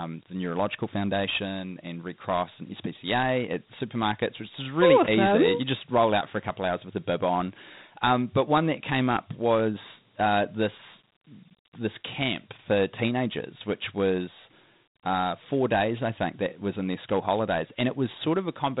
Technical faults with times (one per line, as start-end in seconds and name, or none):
0.00-18.80 Dialogic VOX ADPCM